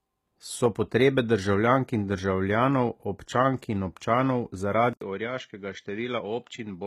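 Throughout the speech, the treble is plainly damaged by what is likely HE-AAC compression. Only the lower spectrum is truly coded. The top is copied up from lower bands and coarsely shaped. Harmonics fail to line up above the crossover. This fits a bitrate near 20 kbps.

At 4.93 s, the input likely switched to a poorer device. An 80 ms silence marks the switch. From there to the end, nothing remains above 7.6 kHz. The level drops by a few decibels. A new noise floor appears, far below the speech.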